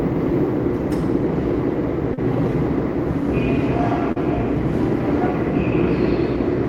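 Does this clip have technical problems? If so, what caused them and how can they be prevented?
Yes. There are two brief short concealed packet losses, at 2.14 to 2.19 s and 4.12 to 4.18 s. Audio arrived too late for the decoder, which extended the preceding sound for about 32 ms and 39 ms, then crossfaded back, leaving short smears. A larger jitter buffer, a wired or less congested connection, and forward error correction would prevent them.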